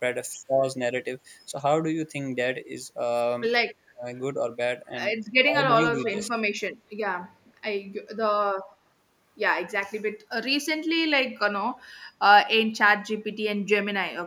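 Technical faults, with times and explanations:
3.82 to 4.16 s and 5.91 to 6.42 s, speech suppressed in double talk: The speech sinks and partly cuts out, then returns. The first dip goes about 30 dB down, the second about 25 dB, with roughly 0.3 s and 0.2 s actually affected. This likely happened because the far side spoke at the same time. The echo canceller could not tell this talker from its loudspeaker's echo, so it attenuated everything.
6.07 to 6.3 s, echo leak: A delayed copy of the speech surfaces inside the second suppression, trailing the original by 220 ms. It sits about 15 dB below the speech and sounds brief. The likely cause is a speakerphone whose canceller failed to remove all of the sound its microphone picked up. The remainder was sent back down the line, where it is heard as a short scrap of echo.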